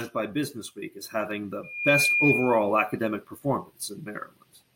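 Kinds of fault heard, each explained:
Loudspeaker feedback squeal: a piercing 2.4 kHz tone swells up over about a third of a second just after "as having", then squeals about 5 dB above the speech until 2.76 s. The microphone was picking up its own loudspeaker, and at that frequency the loop's gain exceeded one.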